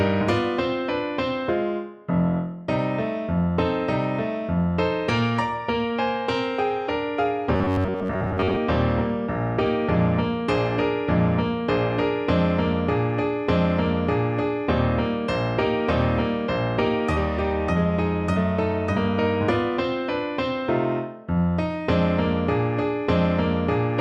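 From 7.56 to 8.58 s the sound turns into a rigid metallic buzz near 94 Hz, robotic sound from repeated short buffers, likely caused by most of that stretch being filled with a repeated ~11 ms buffer.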